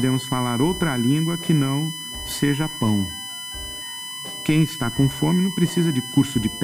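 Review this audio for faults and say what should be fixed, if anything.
A steady, fixed-pitch whine runs under the whole clip, sitting about 10 dB below the wanted sound. This is USB whine. Its fundamental is at 1 kHz, with the strongest component at the 3 kHz harmonic. The 1 kHz spacing matches the USB bus's 1 ms frame rate: current drawn in step with each frame leaks into the audio path through shared power or ground. To prevent it, power the interface cleanly or isolate its ground from the USB supply.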